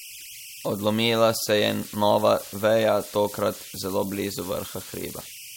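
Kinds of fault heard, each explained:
Converter idle tones: a tone around 3 kHz, about 17 dB below the speech, runs throughout, from an undithered delta-sigma converter falling into repeating bit patterns.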